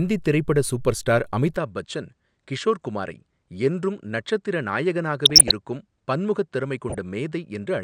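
At 1.57 s, right after "திரைப்பட சூப்பர்ஸ்டார்", the recording likely switched its input to a poorer device. From there to the end nothing reaches above 9.3 kHz, so the speech turns duller and boxy, drops a few decibels, and sits over a faint new noise floor. There is no gap at the changeover.

DAB burbling follows at 5.25–5.51 s and again at 6.89–6.98 s. Weak reception let a small fraction of a percent of bit errors slip past error correction into the MP2 stream, corrupting the audio data. Individual sub-bands are hit, producing brief blips of noise over the speech.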